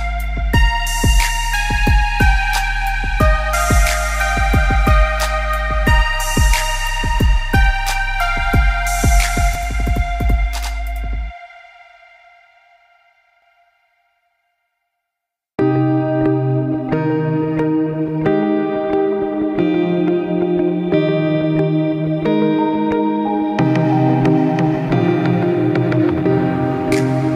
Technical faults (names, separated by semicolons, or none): channel delay (doubling)